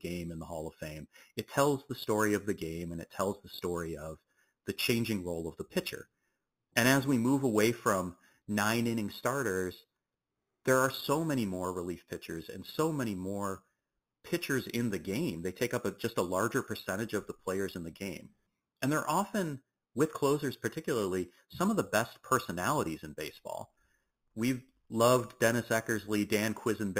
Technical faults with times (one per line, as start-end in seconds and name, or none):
0.00-27.00 imaging from sample-and-hold upsampling